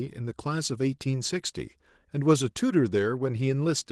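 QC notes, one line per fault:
No faults to note, so there is no fault line for this clip.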